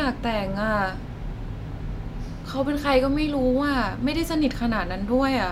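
Nothing stood out on listening to this speech recording.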